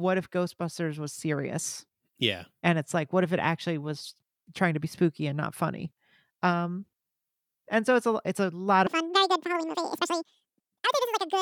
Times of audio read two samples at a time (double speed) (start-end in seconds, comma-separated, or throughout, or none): 8.87-11.42